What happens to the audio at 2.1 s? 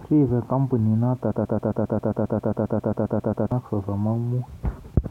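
At 2.1 s you're right in the middle of a broken-record loop running from 1.32 to 3.52 s. A 134 ms scrap of speech repeats back to back, 16 times, in a stutter. The player or stream likely stalled and kept resending its last fragment, so the real speech there is lost.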